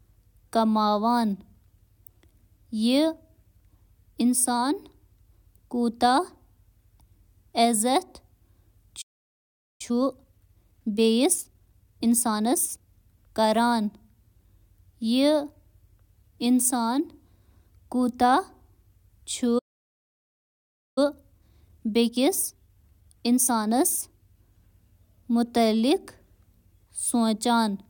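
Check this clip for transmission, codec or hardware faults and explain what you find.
Two playback stalls, each followed by time-compressed catch-up, show up in this speech clip.

Playback stall: the speech cuts to silence from 9.01 to 9.81 s (0.78 s) and from 19.58 to 20.98 s (1.38 s). The likely cause is the player's buffer running dry or its audio thread being blocked, so output halts mid-flow until data resumes.

Time-compressed catch-up: after each stall the speech is hurried, from 9.81 to 12.81 s at 1.25 times normal speed and from 20.98 to 23.98 s at 1.15 times. The player is cutting and cross-fading short segments to shed backlog, which keeps pitch normal.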